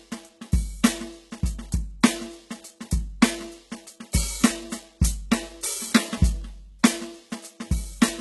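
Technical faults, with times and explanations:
Throughout, HE-AAC compression: the music's treble sounds gritty and metallic, with nothing above 11.8 kHz and heavy coding damage across the band. This is likely HE-AAC at a very low rate, which fits roughly 16 kbps. Only the lower spectrum is truly coded. The top is rebuilt by copying lower bands upward under a coarse envelope, so its harmonics no longer line up with those below the crossover.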